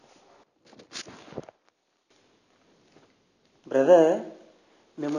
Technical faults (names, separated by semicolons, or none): none